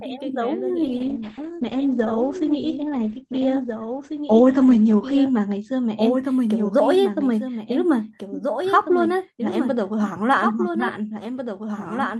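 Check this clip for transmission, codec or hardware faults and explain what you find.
Two faults are audible: a doubled audio track running the whole way through, and a call bitrate drop early in the clip.

Doubled audio track: Across the whole clip, the speech is shadowed by a second copy of itself arriving roughly one and a half seconds later and about 5 dB quieter. The copy is full-band and dry, with no decay or room colouring, so it sounds like an overlapping duplicate rather than an echo. The likely cause is the same signal being captured a second time through a slower path and mixed back in out of step.

Call bitrate drop: From 0.84 s to 6.03 s the speech turns rough and watery and loses its top end, with everything above 8 kHz gone, down from a 20 kHz band before the drop. It stays at its worst for about 4.3 s before clarity returns. This happens when the call's bandwidth estimate collapses and the encoder is forced onto far fewer bits, coding more coarsely and cutting off high frequencies. 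The sound points to a fall from around 48 kbps to about 11 kbps.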